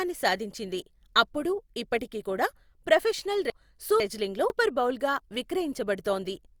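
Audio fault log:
3.5–4.5 s, chunks out of order: a 500 ms chunk plays one chunk late, jumbling the speech across three hard joins; unlike a dropout, nothing goes missing.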